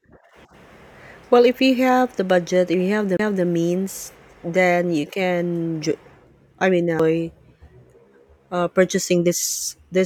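At 3.17 to 3.19 s and again at 6.99 s, a CD skip makes the laser jump tracks. The player mutes for about 20 ms, then a few milliseconds, and resumes elsewhere. Each sounds like a tick and a jump. The waveform shows a brief flat gap, and the spectrogram a thin vertical line.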